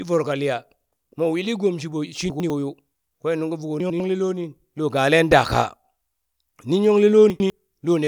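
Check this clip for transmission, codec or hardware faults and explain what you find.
One fault appears: chunks out of order, at 2.3–2.5 s, 3.8–4.0 s and 7.3–7.5 s. Each time a 100 ms chunk plays one slot late, causing a brief jumble. The waveform shows three hard joins at each, which appear as vertical streaks on a spectrogram.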